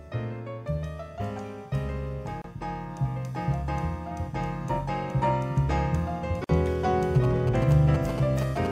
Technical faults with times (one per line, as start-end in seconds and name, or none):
2.42-2.44 gap at a join of encoded pieces
6.44-6.49 gap at a join of encoded pieces
7.15-8.67 GSM signalling bursts